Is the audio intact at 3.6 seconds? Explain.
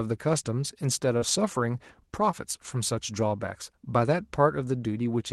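Yes, the speech at 3.6 seconds is intact, with nothing broken or missing at that moment beyond the ordinary sound of a call codec path.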